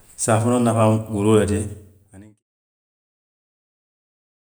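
Nothing technical goes wrong in this bit of speech; the level simply eases down in a gentle fade-out, from around a second and a half to 2.44 s, the way an editor would finish it off, with no click or hard edge.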